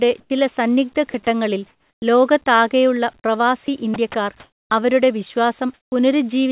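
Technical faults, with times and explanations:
0.2–0.3 s, 1.7–2.02 s, 4.4–4.7 s and 5.74–5.92 s, comfort noise in place of the background: during these pauses, lasting 0.1 s, 0.32 s, 0.3 s and 0.18 s, the real background (about 39 dB below the loud parts) gives way to a steady, featureless hiss. It is about 7 dB and 4 dB quieter in the first two gaps, about 1 dB louder in the third and about 1 dB quieter in the last. The likely cause is discontinuous transmission, with the receiver synthesising noise while the sender stays silent.
1.1–1.14 s, 3.2–3.24 s, 3.66 s and 3.94 s, sound dropped by the voice detector: at each point about 20 ms of actual sound is cut and replaced by the same flat synthetic noise, for 40 ms at the first two and 20 ms at the last two. These are brief dropouts. The likely cause is the sender's voice detector misjudging low-level sound as background and pausing transmission until it triggers again, all over a narrowband path with nothing above 4 kHz.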